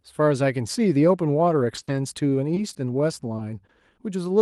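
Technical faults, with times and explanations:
1.75–2.77 s, repeated packet loss (robotic sound): four holes totalling 100 ms, the longest 40 ms, fall within about a second. Each is covered by extending the preceding sound, about a tenth of the span, and about 150 ms of audio ends up roughly rebuilt. Because the gaps come in quick succession, the patches chain into a choppy texture with pieces missing rather than isolated blips. That persistence across a whole stretch is what distinguishes it from the single short losses later on.
3.37–3.41 s and 3.67–3.71 s, short concealed packet loss: at each point 20 ms of audio never arrived, and the decoder bridged the hole by continuing the last sound, from its pitch where voiced and as shaped noise where not, before blending back into the real signal. Each is heard as a brief smear or wobble with a small piece of sound missing, and there is no sustained robotic quality because nothing follows closely behind.
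3.39–3.41 s, lost packet rebuilt from error correction: within the first short loss, 20 ms was restored from a low-bitrate copy carried in the next Opus packet, so nothing is actually missing there. The rebuilt frame sounds coarser and noisier than its surroundings instead of smeared. The call itself runs Opus at 48 kbps with about a 12 kHz bandwidth, so no separate top-end dip stands out on the rebuilt frame.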